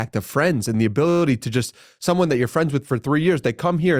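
A system hang loop runs from 1.09 to 1.22 s in this speech, just after "of friends and the" and before "to just someone that". The computer or its audio driver stalled while the sound hardware kept replaying its last ring buffer. An 11.6 ms slice repeats 11 times, which fits a 512-sample buffer. At that length the repetition is heard as a steady buzz at about 86 Hz. Once playback resumes, essentially no audio is missing.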